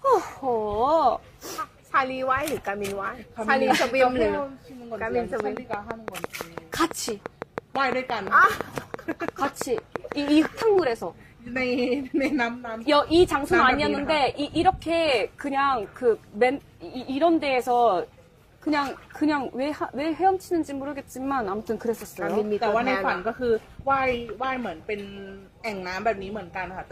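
From 5.40 s to 10.80 s there's a train of clicks, a steady ticking at about 5.9 per second, around thirty near-identical pops standing roughly 15 dB proud of the signal and running through the quiet bits too. Interference from nearby equipment or a faulty connection or power supply is the likely culprit.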